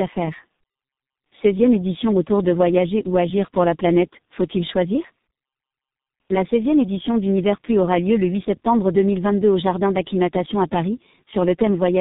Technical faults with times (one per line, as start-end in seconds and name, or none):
0.00-12.01 tandem speech coding